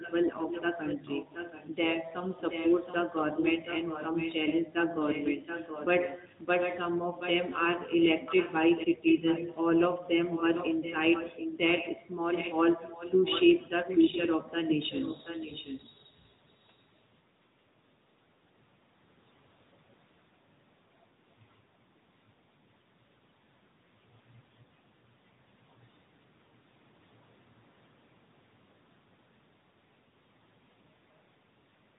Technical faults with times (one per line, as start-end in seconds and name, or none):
0.00-31.98 AMR narrowband mobile codec
0.00-1.87 echo leak
2.39-6.79 echo leak
7.18-11.94 echo leak
12.32-14.30 echo leak
14.70-16.10 echo leak